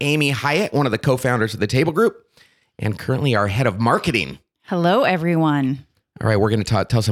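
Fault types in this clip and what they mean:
Nothing stood out on listening; no fault could be heard anywhere in the audio.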